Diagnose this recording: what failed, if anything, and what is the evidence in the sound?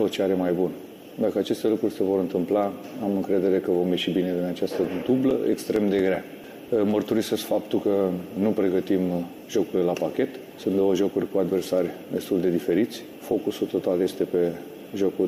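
The playback stage failed: CD scratch ticks, where a blemish on the disc wipes out more data than error correction can restore on each revolution. From 4.39 to 6.91 s there are twelve regular ticks, about five per second, each a burst of concealed or muted samples, the longest about 4 ms.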